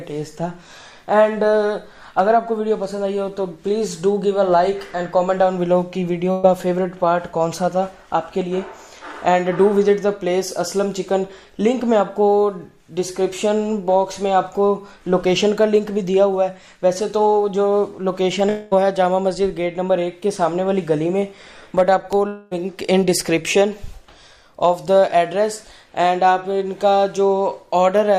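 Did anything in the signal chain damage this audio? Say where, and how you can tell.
Yes. The damage happened in the network stage. At 6.31 s a burst of packet loss lasts about 140 ms, to 6.45 s. The sound does not stop. The receiver holds the last sound and fades it for about 117 ms. When the audio resumes, it has jumped ahead. Roughly 120 ms of material is simply gone. The concealment fills the hole, but the sound that belonged there never arrived.

Two longer gaps follow, at 18.49 to 18.73 s and 22.27 to 22.53 s. Each sounds like a long network dropout. The last sound is stretched into a decaying fill for about 222 ms and 238 ms. No stretch of dead silence appears, because the fill covers the whole gap. The audio then returns further on, missing about 220 ms and 240 ms. The likely cause is the stream stalling and losing those stretches in transit.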